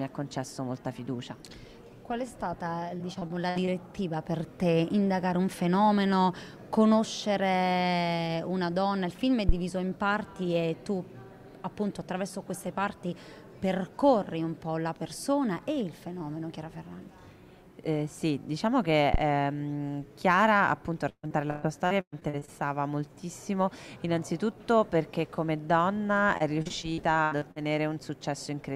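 From 2.97 to 3.69 s, repeated packet loss (robotic sound) sets in: short dropouts up to about 57 ms are patched by stretching the preceding sound, so about a fifth of the stretch is filled-in material. It sounds choppy, and on a spectrogram it appears as smeared, repeated frames and flat horizontal streaks where the detail should change.

At 9.49 to 9.55 s and again at 19.14 to 19.20 s, a phantom power thump appears. A supply being switched on or off on the live input sends a voltage step through the coupling capacitors, heard as a brief, deep thud decaying in about 13 to 14 ms. The waveform shows a sudden one-sided offset jump. The spectrogram shows a low-frequency burst.

The packet loss returns more heavily from 21.09 to 22.50 s, with gaps up to 137 ms and about 39% of the span concealed. It recurs from 26.38 to 27.58 s with gaps up to 78 ms. Both passages sound stuttering, showing the same smeared, looping texture.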